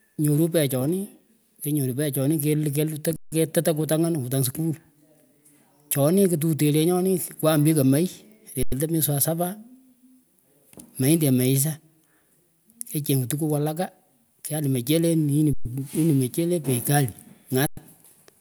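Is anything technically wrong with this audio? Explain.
Yes. Four underruns with held sample occur in this speech, at 3.16–3.32 s, 8.63–8.72 s, 15.53–15.65 s and 17.67–17.77 s, lasting 90 to 160 ms. Each time the output buffer ran dry, the converter froze on its last sample value, so the waveform flattens and the sound briefly stops with almost no click. Playback then resumes where it stopped, with nothing dropped, so the restart is soft.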